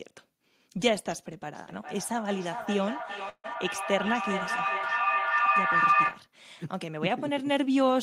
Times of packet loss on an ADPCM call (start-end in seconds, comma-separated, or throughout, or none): none